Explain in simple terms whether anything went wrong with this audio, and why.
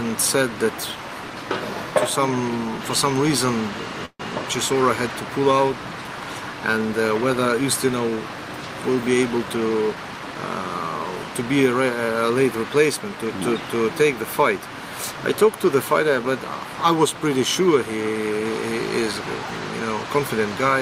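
Two things went wrong. At 4.05 to 4.22 s the sound briefly stalls: the last bit of audio is stretched into a fading buzz or hiss, ending in about 60 ms of silence, then resumes where it left off. That is a call audio freeze, likely caused by delayed packets emptying the jitter buffer. Nothing is lost, but about 141 ms of delay is added.

From 8.97 to 10.35 s the audio plays about 10% faster at unchanged pitch and sounds hurried. This is a jitter buffer speed-up: the receiver trimmed many tiny slices, roughly 150 ms in total, to work off the extra delay.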